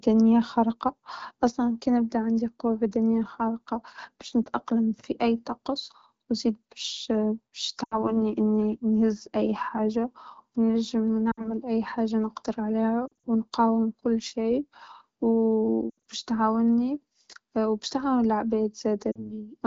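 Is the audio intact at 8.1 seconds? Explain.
No. Between 7.83 and 8.17 s, lost AMR speech frames occur. Radio errors corrupted a run of frames, which fits four 20 ms frames. The wideband decoder repeated the last good pitch and vocal tract settings at falling gain. The speech smears, fades quickly, then returns weak and rough.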